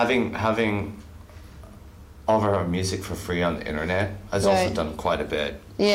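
Nothing technically wrong can be heard in this audio.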